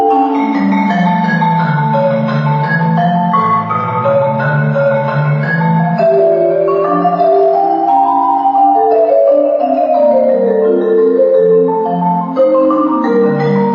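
Nothing here stands out as a technical problem; the audio just runs along steadily with no glitches, dropouts or odd artefacts catching the ear at any point.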